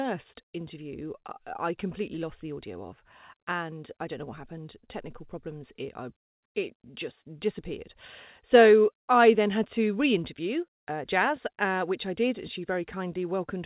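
No technical faults can be heard in the speech, which arrives over a call path working as it should, with nothing above 4 kHz and the usual coding grain that points to a 64 kbps G.711 mu-law codec.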